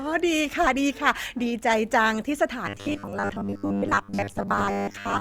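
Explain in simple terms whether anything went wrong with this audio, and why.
From 2.67 s to the end at 5.21 s the voice turns into a rigid, metallic 100 Hz buzz: robotic sound from repeated short buffers, likely from repeating 10 ms chunks.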